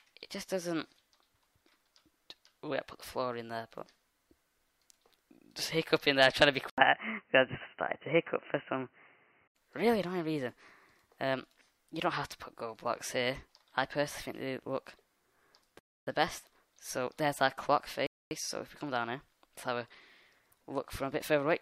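The audio has two kinds of fault. From 6.70 to 9.56 s it turns dull and boxy, with nothing above 3 kHz, an 80 ms silence at the switch, a modest level shift and a faint new noise floor. The likely cause is an input switched to a poorer device. Those changes in level and noise set it apart from a simple low-pass filter. Rebuffering stalls at 15.79 s (278 ms) and 18.07 s (244 ms) cut the sound to silence and then resume exactly where it stopped. Unlike a dropout, nothing is lost; only time is added.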